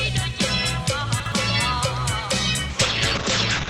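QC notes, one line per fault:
1.20–1.32 s, chunks out of order: A 60 ms chunk of audio was delivered one position late, so it plays after the chunk that should have followed it. Nothing is missing, but the two pieces swap places, creating three hard joins where the waveform breaks off and restarts mid-cycle. The reversed order makes this short stretch sound jumbled, as if the sound briefly stutters and skips back on itself.
2.7 s to the end, call bitrate drop: The call's bandwidth estimate fell, and the encoder cut its rate from 32 kbps to 8 kbps, staying at the lowest rate for about one second until the clip ends. With so few bits, the codec quantises the signal far more coarsely and narrows the audio band from 20 kHz to 8 kHz. The top end disappears, leaving the sound muffled, while the coarse coding adds a rough, watery texture.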